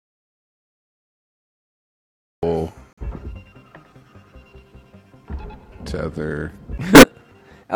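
From the very start until 2.43 s the clip sits in an audio dropout to silence: plain silence with no room tone, so the waveform is a flat line and the spectrogram is blank until the sound begins abruptly. The likely cause is a lost input while recording continued.

At 2.93 s a corrupt frame muted fault cuts a clean hole through to 3.07 s. The sudden gap of about 0.14 s, square-edged on the waveform and empty across all frequencies, fits three rejected compressed frames replaced by silence.

From 6.94 s to 7.04 s a corrupt frame decoded fault produces a short glitch, spanning a couple of frames. The damaged frames were played anyway, spraying energy at wrong frequencies: a bright vertical smear on the spectrogram and a sharp spike on the waveform.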